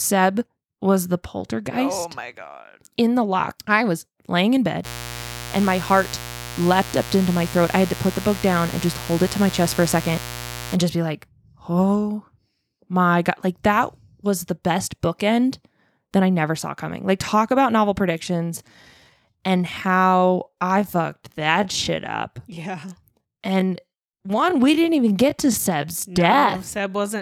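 Speech clip with two distinct faults. From 4.83 s to 10.78 s, after "I was laying in" and up to "just be like oh", a mains buzz sits under the speech at roughly 15 dB below it. It is a steady, raspy buzz built on 60 Hz and its harmonics, which extend well into the kilohertz range. That harsh upper content comes from sharp switching spikes, as from a dimmer, a rectifier or an unshielded line, entering the signal twice per mains cycle. From 18.16 s, after "talk about novel", through to "dead when we stopped" at 27.21 s, the clip is a time-stretched section. The pace abruptly drops to about 0.72 times normal speed while pitch stays unchanged, and the speech drags. This is likely software stretching the audio to fill a longer duration, keeping pitch by repeating short fragments of the waveform.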